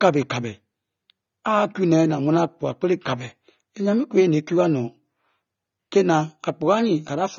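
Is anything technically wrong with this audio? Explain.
Yes. Throughout the speech there is plainly audible AAC compression damage: nothing above 7 kHz, and a smeared, warbling texture on sibilants. This is likely a low-bitrate AAC-LC encode, consistent with about 24 kbps, where coarse spectral quantisation forces a lowered cut-off and gaps between bands.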